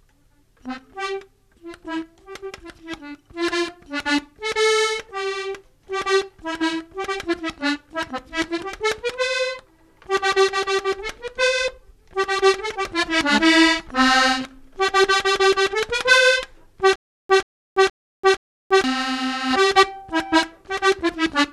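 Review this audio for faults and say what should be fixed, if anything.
From 16.96 to 18.84 s a stutter with silent gaps breaks the flow: a short burst of about 133 ms plays, cuts to dead digital silence for about 337 ms, then the same burst returns, four times at a steady 471 ms cycle. The likely cause is a stalled player or stream that replayed its last buffered fragment on each retry and then ran empty, so the audio due in that stretch never arrived and is missing. Give the playback or streaming path a larger buffer and proper underrun recovery so a stall waits for fresh data rather than looping stale fragments.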